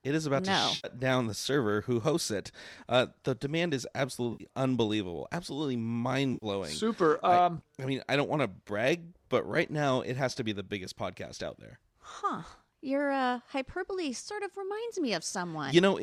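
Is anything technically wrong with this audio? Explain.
Yes. Three brief smeared, noisy patches interrupt the speech: 0.76 to 0.87 s, after "is about no to" and before "down the server who"; 4.33 to 4.44 s, after "the demand is" and before "unbelievable absolutely"; and 6.34 to 6.46 s, just after "unbelievable absolutely". This is AAC frame loss with concealment. Roughly 70 to 80 ms of coded audio went missing each time, which fits a run of 10 ms low-delay frames. The decoder patched the gap from the last good spectrum, likely in an AAC-ELD stream.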